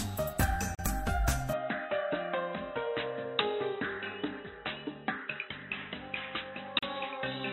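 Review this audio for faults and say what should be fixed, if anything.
Pieces of the recording were encoded separately and joined without trimming the encoder's start delay and end padding. This causes a gap at a join of encoded pieces: a silence of about 38 ms at 0.75 s and about 37 ms at 6.79 s, six seconds apart, which fits pieces roughly 6 s long. The sound drops out with smeared edges, then resumes where it stopped. Trim each piece's delay and padding, or encode the whole stream in a single pass.

From 1.53 s to the end, the sound is likely an input switched to a poorer device. At that moment it turns duller and narrower, with nothing above 3.9 kHz. The level falls by about 5 dB, and a new noise floor appears around 50 dB below the signal. There is no silence at the switch, so the change in tone is immediate. Lock the recording input to one device, or disable automatic switching to headset or fallback microphones during capture.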